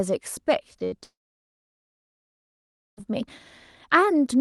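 Two short concealed packet losses come first, from 0.73 to 0.77 s and from 0.79 to 0.82 s. Each time about 20 ms of the speech stream failed to reach the decoder in time, and the receiver bridged the hole by extending the preceding sound before crossfading back into real audio. Each gap comes across as a quick smear or wobble in the speech rather than a clean cut.

A burst of packet loss follows almost immediately, from 0.84 to 0.94 s. Roughly 80 ms of consecutive audio went missing, so concealment had to run much longer. It synthesised a continuation of the last sound while steadily lowering its level, which is heard as a held buzz or hiss that fades. When real audio resumes, the stretch in between has been skipped.

The largest fault runs from 1.04 to 3.03 s, with nearly 2 s of sound lost. The cause is likely a long network dropout. The decoder keeps extending the last sound only briefly, the fill decays, and then about 1.8 s of near silence follows. 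Speech picks up again at 3.03 s, further along, with everything from that interval absent. The audio around these gaps carries the coding character and roughly 12 kHz upper limit of an Opus call path at about 32 kbps.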